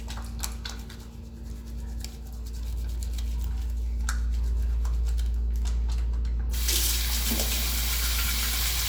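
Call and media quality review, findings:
No audible transport, level or device faults found in this recording of sounds; signal continuous with stable level and no dropouts, distortion or timing irregularities detected.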